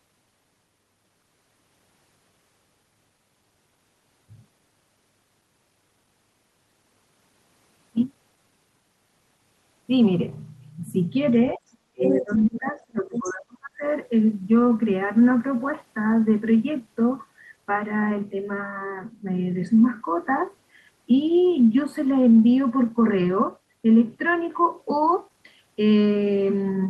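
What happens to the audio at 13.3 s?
An echo canceller likely lost track during double talk: with both sides speaking at once, it could not tell the local talker from the loudspeaker echo and turned the microphone signal down. This speech suppressed in double talk runs from 11.93 to 13.83 s. At 13.3 s the speech is in that stretch, dipping in and out with its top end dulled. The deepest cut is around 35 dB, and about a second and a half of the span is affected.

Overlapping this, the same canceller likely failed to remove all of the far end's audio played from the loudspeaker. The other side's voice leaking through shows up from 13.17 to 13.33 s as a short scrap of a second voice, roughly 15 dB below the local speech.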